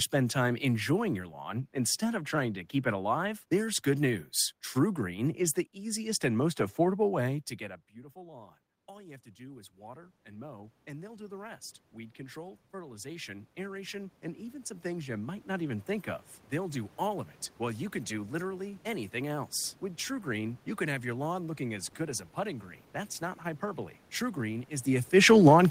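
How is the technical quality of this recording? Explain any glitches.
Two automatic gain control faults affect the recording, one slow and one brief near the end.

Automatic gain rising, 7.58 to 16.85 s: after "most affordable way to" the voice drops about 22 dB as the talker moves away. The gain control then climbs about 17 dB over nine seconds, so voice and room noise swell together until "all of it while". On a waveform the envelope grows steadily, and a spectrogram brightens across all bands at once.

Automatic gain falling, 25.26 to 25.64 s: the control senses the input as too loud or its background too strong, and pulls gain down about 5 dB. Voice and background sink together, visible as a short tapering of the waveform envelope.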